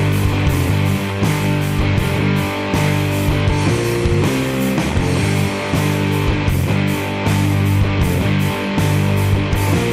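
Nothing technically wrong turns up anywhere in this audio, so there's no fault to point to, no time to flag and no cause to chase.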